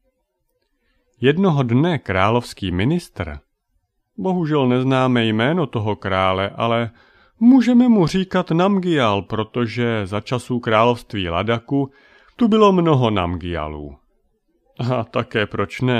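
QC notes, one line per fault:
No faults detected.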